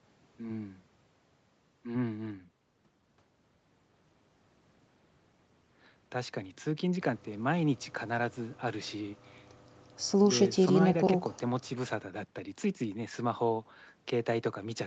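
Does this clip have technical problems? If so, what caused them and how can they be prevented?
No, there are no technical problems in this speech clip. The sound has nothing above 8 kHz, the bandwidth of call audio carried over an Opus-coded WebRTC path, which is normal here.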